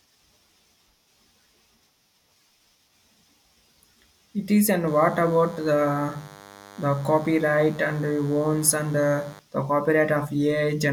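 DECT cordless phone buzz runs from 4.87 s to 9.39 s. A nearby DECT handset or base fires a radio burst every 10 ms, which the audio circuitry rectifies into sound, so a thin, steady 100 Hz buzz rich in harmonics sits well beneath the speech.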